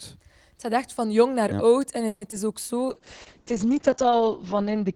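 At 1.82 s, just after "echt van jong naar", a sharp snap sits on top of the speech: an electrical switching spike, most likely an arc from a nearby switch, motor or static discharge picked up by the audio line. It is added rather than replacing anything, so the speech runs straight through it. That separates it from a dropout tick, which comes with a loss of the underlying sound.

From 2.07 to 2.23 s comes a call audio freeze. The receiver stretches the last sound into a fading buzzy tail for about 140 ms, with no true silence. The likely cause is packets delayed in transit until the jitter buffer ran dry. When they arrive, the speech resumes exactly where it stopped, so nothing is lost, but everything after is pushed 140 ms later. Packet loss, by contrast, removes material.

At 2.31 to 2.34 s there is short concealed packet loss, heard as a brief smear. About 40 ms of audio never reached the decoder in time. 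Only around 10 ms was filled by extending the last sound before blending back, so a small piece of speech is actually missing and the timing pulls back by about 30 ms. That loss of content is what sets it apart from the freeze just before it.

From 2.87 s to the end, a call bitrate drop takes hold. The encoder falls from 32 kbps to 7 kbps and stays at its lowest for about 1.23 s, while the coded bandwidth shrinks from 20 kHz to 8 kHz. The speech turns muffled and rough, with a watery texture, because of coarser coding and the lost top end. Unlike a brief glitch, this degradation is sustained, not a momentary event.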